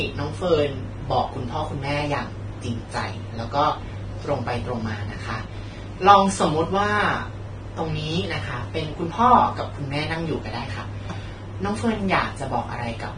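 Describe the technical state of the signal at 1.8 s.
At 1.8 s the speech carries heavy damage of the kind Vorbis compression likely causes, present throughout the clip. Nothing survives above 9.7 kHz, and the coarsely quantised treble turns into grainy hiss, consistent with a low bitrate. A spectrogram shows a hard ceiling and speckled, blotchy upper bands.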